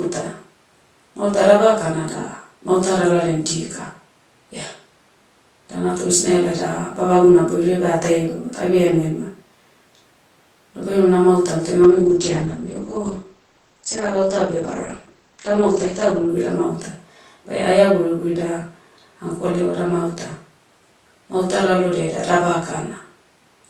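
From 11.85 s, after "ema namautam toh", a call bitrate drop to 10 kbps muffles and roughens the speech. The spectrogram's ceiling falls from 20 kHz to 8 kHz.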